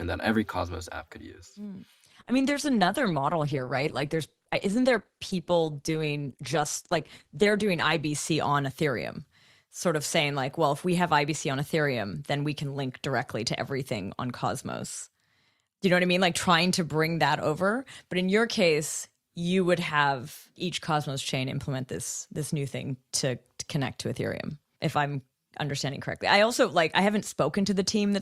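At 2.13 s the speech drops abruptly to a lower-bitrate version of an adaptive stream, with no gap. For six seconds codec artefacts rise. This fits a fall from roughly 64 to 16 kbit/s. Quality returns suddenly at 8.13 s.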